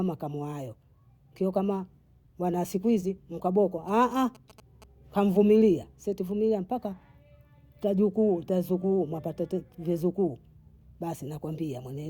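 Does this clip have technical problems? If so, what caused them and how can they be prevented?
Yes. From 3.88 to 4.84 s, between "wa siku hizi mkaboko" and "nkamvumilia si tuivumilia mpaka", there is interference from GSM signalling bursts. It sounds like a galloping dit-dit-dit of short buzzes at about 217 Hz, roughly 25 dB below the speech. A nearby 2G phone was exchanging short radio bursts with the network. The audio circuit rectified that radio energy and turned it into audible clicks and buzz. To prevent it, keep phones away from the recording gear or switch them to flight mode.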